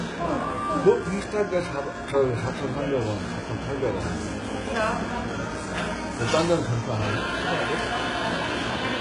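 HE-AAC compression runs through the whole clip. The treble sounds gritty and metallic, and nothing comes through above 11 kHz. This is likely HE-AAC at a very low bitrate, which fits something near 12 kbps. Such a codec spends its few bits on the lower spectrum and synthesises the top by copying lower bands upward under a coarse envelope. The copied harmonics don't align with the real ones, so bright content turns rough and lispy, and the damage is heavy.

GSM phone buzz appears from 2.97 to 3.89 s. It is a hard, raspy buzz at 217 Hz, rich in harmonics and about 20 dB below the sound. A nearby 2G handset on a call transmits radio bursts at that rate, and the audio circuitry rectifies each pulse into an audible click train. Because a call holds the transmission steady, the buzz is nearly steady and has no relation to the sound it overlays.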